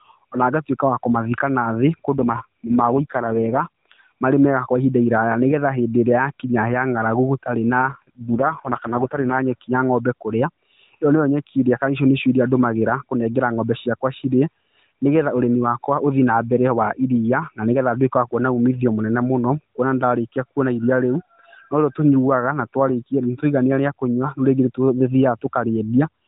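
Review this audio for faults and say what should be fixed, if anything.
AMR rate drops occur from 2.2 to 4.1 s, between "ngatuĩka wa kũmathika nathi" and "marĩ mega kwa ihinda", and from 7.9 to 9.4 s, ending before "nyeki ya ng'ombe kũrĩa". The speech turns rough and synthetic, with no gap and no change in bandwidth. This fits a weak radio link forcing the codec down from 12.2 to 4.75 kbps. To prevent it, improve radio coverage or signal strength so the link stays at the full rate.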